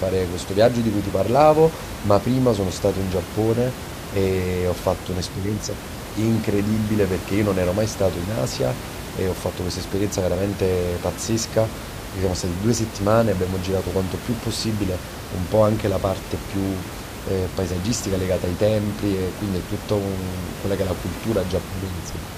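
Nothing goes wrong in this speech recording; the only thing in the background is some ordinary room noise sitting about 11 dB below the talking, which is just part of where it was recorded.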